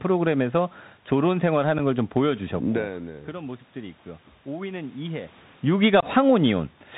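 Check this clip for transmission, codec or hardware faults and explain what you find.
Two problems stand out: a Bluetooth link running the CVSD headset codec, and a couple of unconcealed Bluetooth headset packet losses.

The CVSD codec shapes the whole clip. It encodes one bit per sample, just up or down, with an adapting step. Nothing reaches past 4 kHz, sibilants come out scratchy, louder bright bits smear, and a grainy hiss sits under the speech.

The unconcealed Bluetooth headset packet loss hits twice. At 1.79 s there's a tiny dropout of a few milliseconds, probably one lost packet. From 6.00 to 6.04 s there's a longer gap, likely several packets. Each gap is filled with silence or an idle pattern, so you hear hard-edged holes and the speech coming back slightly quieter.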